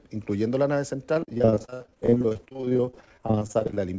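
From 1.14 s to 3.80 s the sound turns choppy and robotic, with a stuttering quality as small pieces keep dropping out. This is repeated packet loss: dozens of short gaps, the longest about 62 ms, each bridged by stretching the last received sound before the next loss arrives. Concealment covers roughly 44% of that span. The audio also runs over the band-limited call codec, which stops at 8 kHz.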